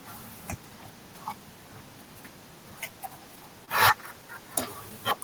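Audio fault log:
3.65–3.69 s, short concealed packet loss: about 20 ms of the speech never reached the decoder in time, and the receiver covered the gap by extending the preceding sound for 17 ms, carrying its pitch forward where it was voiced or substituting shaped noise where it was not, before crossfading back into the real signal. The result is a brief smear or wobble lasting under 40 ms.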